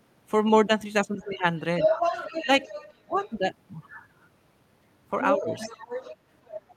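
At 1.19 s a faint trace of the other side's voice leaks through, likely from loudspeaker echo the canceller didn't fully remove. Then, from 1.24 to 1.38 s, the talker is suppressed in double talk, dipping by roughly 10 dB as the canceller likely turned both voices down together. From 1.8 to 3.37 s the other side leaks through again, this time about as loud as the talker. Within that stretch the talker's speech is suppressed in double talk twice, a brief dip of around 10 dB at 2.43 to 2.49 s and a deeper cut of around 20 dB from 3.04 to 3.4 s. From 5.2 s to the end the other side's voice leaks through once more, somewhat quieter than the talker. During it, between 5.37 and 5.71 s, the talker's speech is suppressed in double talk again, dropping by around 15 dB.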